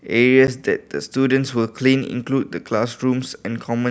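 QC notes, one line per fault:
0.47 s, block of digital silence: the speech drops to silence for about 10 ms and resumes with no fade on either side, so both edges are hard steps. At this length the two steps merge into a single tick rather than an audible hole. The abrupt cut to silence sets it apart from a faded dropout or a lone impulse click. A 10 ms gap fits an output buffer left unfilled in time.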